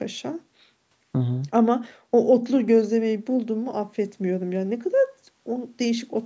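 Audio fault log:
Nothing stood out on listening to this speech recording.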